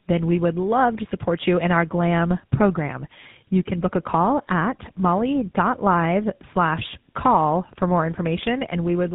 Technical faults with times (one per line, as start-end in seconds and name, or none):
0.00-9.15 tandem speech coding